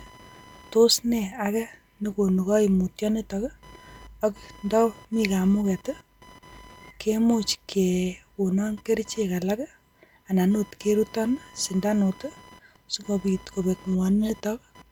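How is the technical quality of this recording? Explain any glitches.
The recording carries computer activity noise throughout. A faint whine near 1 kHz, about 30 dB under the speech, comes and goes. Processor load disturbs the shared audio ground.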